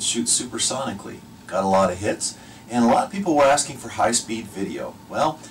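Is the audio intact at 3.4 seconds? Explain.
No. At 3.4 seconds the audio sits inside a stretch of hard clipping running from 2.80 to 3.60 s, where the signal is driven about 9 dB past what the stage can pass. Every peak is sliced off flat, and those squared tops throw energy high up the spectrum, so loud moments turn into a harsh, gritty fuzz. On a waveform the peaks appear as flat plateaus at the limits; a spectrogram shows bright broadband smearing reaching into the upper kHz range.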